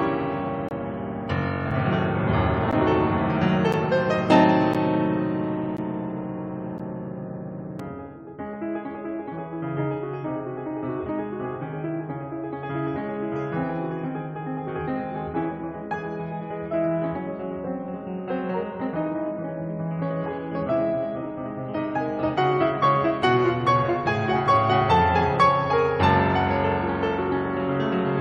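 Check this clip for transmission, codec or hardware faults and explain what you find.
The music is cut by a gap between stream segments, recurring about once a second in the first 8 seconds, at 0.69 to 0.71 s and at 1.71, 2.71, 3.73, 4.74, 5.77, 6.78 and 7.79 s. Each is a sharp-edged dropout to silence, 3 to 24 ms long. Consecutive 1-second segments don't quite meet in time, so the player inserts silence at each join. No audio is lost.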